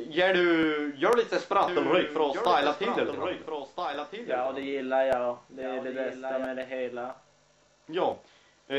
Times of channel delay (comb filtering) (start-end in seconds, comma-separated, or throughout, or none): none